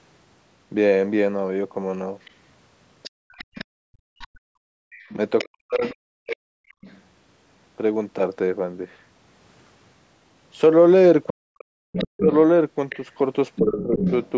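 From 2.25 to 6.99 s, a second, quieter voice sits well below the talker. This is likely the other side's voice leaking through, which the echo canceller failed to remove. Within that stretch, at 3.1 to 3.66 s and 4.71 to 4.9 s, the room background is gated by the echo canceller. The ambience drops by about 35 dB for a fraction of a second. At 3.94 to 4.43 s and 5.45 to 6.54 s, the talker's speech is suppressed in double talk: it sinks deeply while both sides speak, likely because the canceller treated it as echo. Unlike the gating, here the voice itself vanishes, not just the room sound. A stronger leak of the far side returns from 11.27 to 14.3 s, only somewhat below the talker. The talker is ducked again during that leak, deeply at 11.31 to 12.3 s and more shallowly at 13.59 to 14.0 s.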